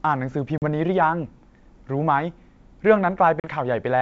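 Hard-edged holes of silence at 0.58 to 0.63 s and 3.40 to 3.50 s, each a 40 ms gap, with speech resuming slightly distorted: packet loss on an ADPCM call, where a couple of lost packets left the decoder's predictor and step size out of step with the sender's.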